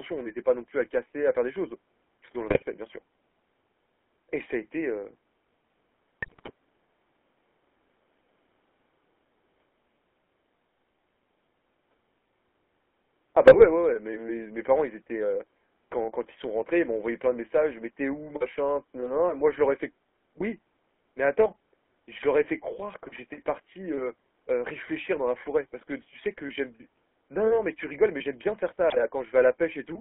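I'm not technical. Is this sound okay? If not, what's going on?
No, not quite. The whole clip runs through the GSM full-rate codec, the original mobile phone voice compression. It rebuilds the voice from a rough model and a thin pulse signal, so the speech sounds buzzy and gravelly throughout, with nothing crisp above about 3.4 kHz.

On top of that there are GSM bit errors, where scrambled data reached the decoder and it briefly got the voice shape or loudness wrong. You'll hear short squawks and gargly pops at 2.48–2.63 s, 6.22–6.51 s (the worst), 13.46–13.65 s and 28.90–28.97 s.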